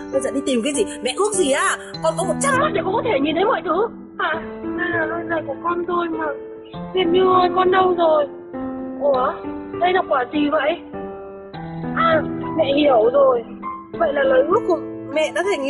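At 2.56 s the audio abruptly turns dull and grainy, with nothing above about 4.3 kHz, and stays that way until 14.56 s without any gap. This is an adaptive stream at a lower bitrate: a slowed connection switched playback to a leaner encode, consistent with Opus dropping from around 64 to 12 kbit/s.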